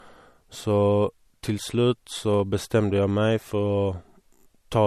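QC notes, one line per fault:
Throughout: low-bitrate audio saved at a high bitrate. The speech carries the artefacts of heavy MP3 compression, and nothing is present above 13.2 kHz, yet the file is stored at a high bitrate. The likely cause is an earlier low-bitrate encoding, consistent with roughly 48 kbit/s, re-encoded at a much higher rate that cannot restore what was discarded. Unlike a simple low-pass filter, the compression artefacts remain audible below the cut-off.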